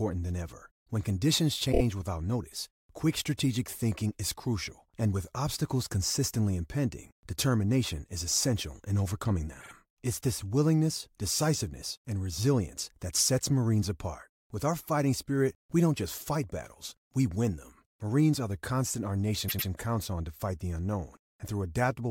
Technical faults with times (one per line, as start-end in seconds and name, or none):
1.71-1.81 repeated frames
9.60-9.71 repeated frames
19.48-19.68 repeated frames